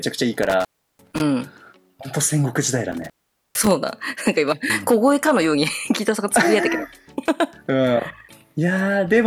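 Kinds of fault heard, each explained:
intermittent contact: from 0.43 to 1.21 s and again from 2.92 to 3.71 s, a loose connection briefly opens. The sound cuts out for 0.34 s and then 0.45 s, with crackle as the contact breaks and remakes, leaving faint hiss in each gap.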